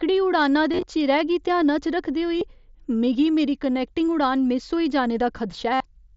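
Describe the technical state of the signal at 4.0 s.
At 4.0 s the speech is intact, with no fault at that moment as it passes through the Bluetooth mSBC headset codec.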